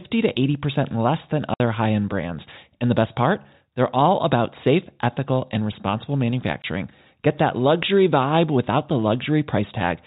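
A speech recording over G.711 telephone coding, with packet loss filled with silence: a 60 ms hole at 1.54–1.60 s between "less than" and "high end brands", fitting three 20 ms packets, and a 20 ms gap at 6.62–6.64 s after "safe ethical and responsible." Unlike concealed loss, these are dead silences with hard edges.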